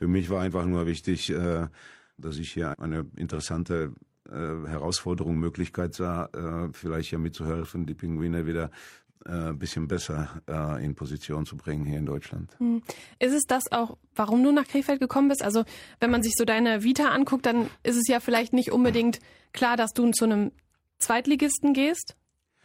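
No faults can be heard anywhere in this recording.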